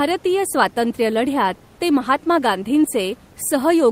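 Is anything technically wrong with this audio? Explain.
No, nothing technical is wrong with this speech clip; the faint room noise sitting about 30 dB below the speech is just part of the space it was recorded in.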